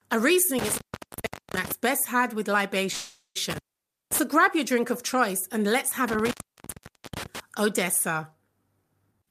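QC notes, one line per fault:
0.59–1.72 s, 3.50–4.19 s and 6.08–7.40 s, intermittent contact: a loose connection briefly breaks the signal path, so the speech drops out for about 0.77 s, 0.53 s and 0.86 s. Crackle marks each break's edges and faint hiss fills it. The first ends just before "best had with", and the second sits between that and "grab your drink of".
2.91–3.37 s, call audio freeze: just after "best had with", the last sound is held and stretched for about 0.44 s, ending in about 90 ms of silence. The speech then resumes with nothing lost but arrives 0.44 s later, which likely reflects delayed packets draining the jitter buffer.
9.11–9.30 s, jitter buffer speed-up: the final moments run at about 193% speed with the pitch unchanged, so they sound rushed. Short pitch-period slices totalling about a fifth of a second were cut to shrink an overfull buffer back toward its target delay.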